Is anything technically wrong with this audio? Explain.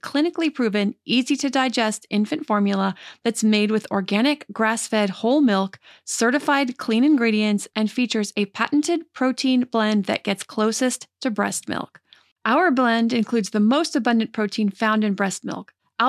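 No, this speech recording has nothing technically wrong with it that a listener can hear. The audio runs continuously, with nothing that points to a problem in capture, processing or playback.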